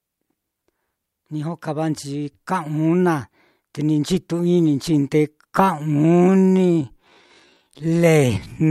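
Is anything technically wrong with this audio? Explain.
Yes. From 5.58 s to the end of the clip, the speech is a time-stretched section: the pace abruptly drops to about 0.62 times normal while the pitch stays where it was. This likely comes from software lengthening the audio by repeating short slices to fill extra time. It sounds dragging. On a spectrogram, harmonics keep their spacing but transitions stretch and blur. The waveform shows drawn-out syllable envelopes with repeated cycles.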